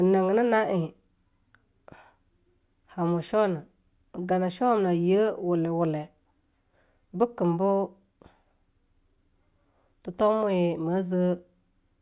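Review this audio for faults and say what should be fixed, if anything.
Nothing here needs fixing; no faults were found.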